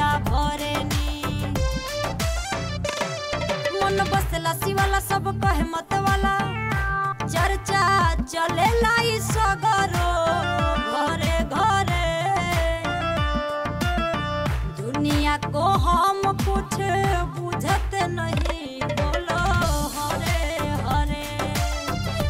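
Nothing here sounds technically wrong; the audio runs its full length without a single glitch or problem worth pointing out.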